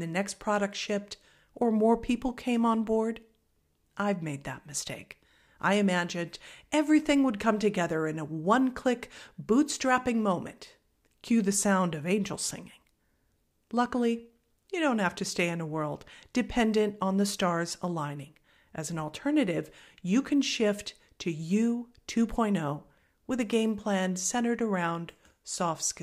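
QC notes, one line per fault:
No faults heard anywhere in the recording.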